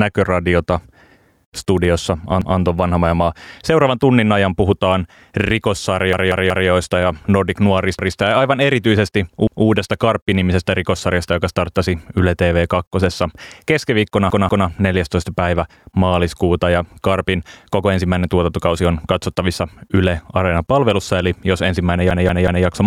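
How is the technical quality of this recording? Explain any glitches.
The speech is disrupted by six repeated-buffer stutters: at 2.42–2.60 s, 6.13–6.69 s, 7.99–8.17 s (just before "ja aivan erityisesti"), 9.47–9.66 s (right after "ja aivan erityisesti"), 14.30–14.68 s, and 22.11–22.66 s (between "palvelussa eli jos ensimmäinen" and "maistui niin"). Each time, fresh audio missed its deadline and the playback device re-sent the previous chunk, roughly 186 ms long, which fits an 8192-sample buffer. The segment sounds twice in most cases, three times at 14.3 s, and four times at 6.1 s and 22.1 s, with a hard splice at every repeat. Nothing appears to be dropped. The sound is delayed, not lost.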